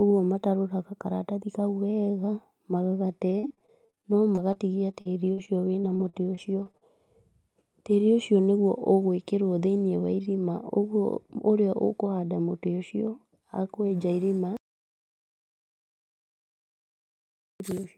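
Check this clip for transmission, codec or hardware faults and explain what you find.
There's one real problem here: repeated packet loss (robotic sound) from 3.29 to 6.83 s. Over that stretch packets keep dropping, roughly two dozen gaps up to 42 ms each. The receiver papers over each hole by stretching the last bit of sound, so the speech turns choppy, with about half a second rebuilt.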